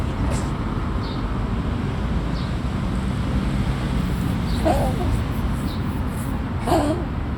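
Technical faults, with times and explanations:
No technical faults are audible in this recording.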